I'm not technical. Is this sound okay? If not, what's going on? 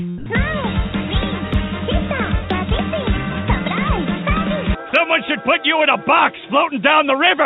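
No. Two brief faults can be heard.

Sound dropped by the voice detector, from 0.18 to 0.26 s: for about 80 milliseconds the sound is replaced by steady noise. The sending side's voice detector likely mistook this moment for background and stopped transmitting, so the receiver filled the gap with artificial noise.

Block of digital silence at 1.54 s: the audio drops out for just 2 milliseconds and back again with no fade, which you hear as a small tick. This most often happens when the software briefly fails to supply audio in time and zeros are played instead.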